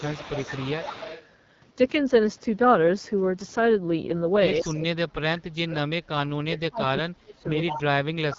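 The whole clip carries the rough, raspy sound of the AMR wideband (HD Voice) codec at its low end, with nothing above 7.5 kHz. That grit points to one of the two lowest rates, around 8.85 kbit/s, where the vocal model can't hold speech cleanly.

From the start to about 1.26 s there's a faint delayed copy of the voice trailing roughly 173 ms behind and sitting about 15 dB down. That's an echo leak, likely a loudspeaker on one side whose echo canceller let some of its own pickup slip back.

In the same stretch the speech dips by about 10 dB at 0.08–0.26 s and 0.6–0.98 s. The heavy cuts come later, around 30 to 35 dB, at 4.6–6.21 s, 6.38–7.51 s and 7.7 s to the end, where the voice nearly vanishes in pieces. That's likely speech suppressed in double talk: with both sides talking at once, the canceller can't tell the talker from the echo and turns everything down.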